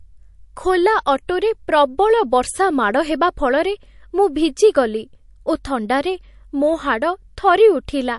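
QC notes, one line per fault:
Throughout: MP3 compression, plainly audible across the speech. Weak frequency detail flickers in and out from frame to frame, giving a watery, swirly texture and smeared onsets, which fits a low bitrate around 48 kbps as the likely cause.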